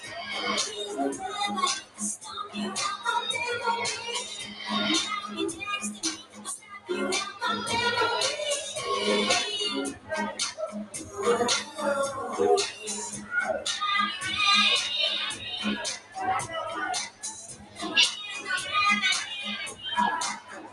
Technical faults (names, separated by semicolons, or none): noise suppressor applied to music or sounds; sound cut by the noise suppressor